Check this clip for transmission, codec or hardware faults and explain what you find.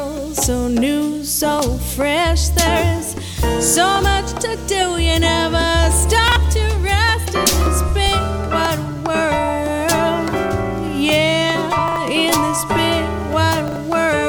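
Chunks out of order occur at 6.28 to 6.36 s, 11.88 to 11.96 s and 13.68 to 13.76 s. In each, a 40 ms chunk plays one chunk late, swapped with its neighbour, leaving a brief jumbled moment with three hard joins. Unlike a dropout, no audio is missing; it is only reordered.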